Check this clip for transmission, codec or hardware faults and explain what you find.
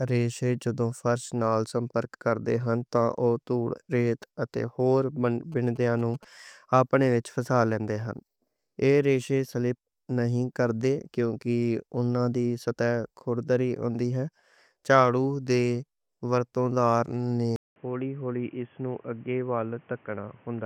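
Two faults are present in this speech clip.

GSM signalling bursts occur from 5.52 to 6.25 s. A nearby 2G phone's short radio bursts are being rectified by the audio circuitry, producing a galloping dit-dit-dit of short 217 Hz buzzes, roughly 25 dB below the speech. On a spectrogram this appears as vertical stripes with harmonics stacked at 217 Hz spacing.

An input switch to a poorer device occurs at 17.56 s, just after "ورتوں کار نے", and lasts to the end. A 200 ms gap opens, and then the sound turns dull and boxy, with nothing above 3.4 kHz, a level about 5 dB lower, and a new noise floor roughly 30 dB down. This likely comes from a switch to a headset call profile. On a spectrogram the upper band is cut off abruptly, and the waveform shows a brief flat gap.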